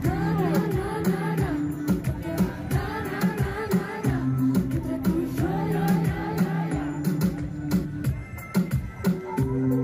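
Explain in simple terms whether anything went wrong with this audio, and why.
Nothing went wrong with this audio, because there are no dropouts, glitches or other technical faults anywhere in it.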